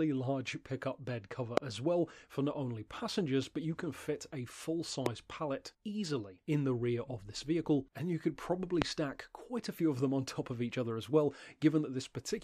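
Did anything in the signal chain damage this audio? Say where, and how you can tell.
Yes. A voltage step, likely from a connector or switch in the analogue wiring, entered the signal three times. Each produces a single loud pop, roughly 20 to 25 dB above the sound, at 1.57–1.60 s, 5.06–5.08 s and 8.82–8.84 s, while the audio continues underneath.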